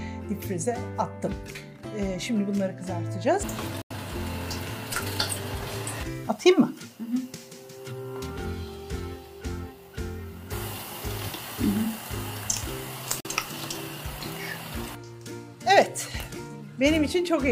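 The audio has two digital broadcast dropouts. At 3.82 s it fades to silence within 3 ms and stays silent for about 0.14 s. At 13.20 s a shorter hole lasts about 0.07 s. The receiver muted on bad frames, losing about 85 ms and 43 ms of programme, which fits two frames and one frame of about 43 ms each.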